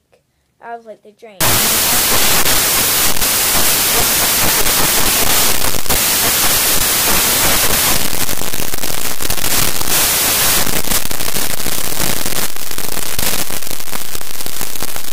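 From 1.41 s to the end, samples are built from the wrong bytes. Misassembled bytes turn the fast-changing low bits into the loud part. It sounds like harsh broadband noise.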